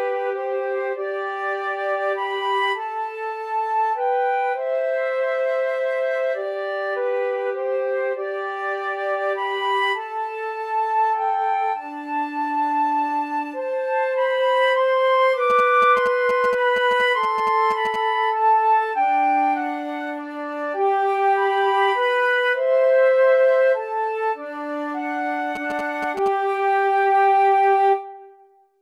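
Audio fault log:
15.50–17.96 s, GSM signalling bursts: a galloping dit-dit-dit of ticks and short buzzes at 217 Hz, sitting roughly 10 dB below the programme. A nearby 2G phone is exchanging brief signalling bursts with its network, and the audio circuit rectifies that radio energy into audible clicks and buzz.
25.56–26.28 s, GSM signalling bursts: a shorter return of the same galloping 217 Hz ticking and buzzing, again roughly 10 dB below the programme, from another round of signalling by the phone.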